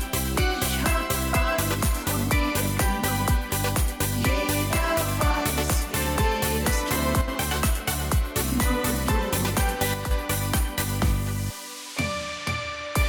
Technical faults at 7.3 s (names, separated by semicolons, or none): one channel drops out